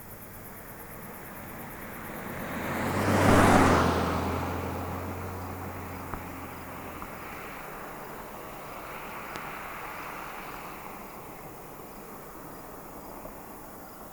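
At 9.36 s a single loud pop cuts through, roughly 15 dB above the sound, which continues underneath. A sudden voltage spike, likely from a switch or static, caused it.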